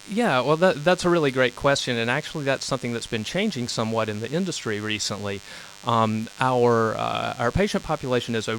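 A steady DECT cordless phone buzz runs under the speech for the whole clip. A nearby handset or base emits a radio burst 100 times per second, which the audio circuitry rectifies into a thin, harmonic-rich 100 Hz buzz sitting well below the speech level.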